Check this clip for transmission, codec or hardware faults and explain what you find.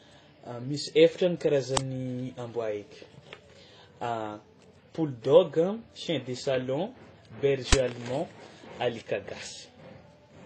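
Two faults are present. One affects the whole clip, and two short events interrupt it.

Throughout the speech, nothing is heard above 9.6 kHz. The sound carries a mix of different artefacts at once. The likely cause is transcoding between lossy codecs. The audio was coded at a low bitrate, then re-coded by other codecs. Each pass spent bits on the previous damage and added its own. The final layer points to a low-rate HE-AAC encode.

At 1.77 s and 7.73 s there are sharp, loud bursts of digital noise. These come from an uninitialised buffer. A block was sent to the output before any audio was written into it, so leftover memory was played as samples. The first burst lasts 5 ms. The second lasts 10 ms, so it sounds longer.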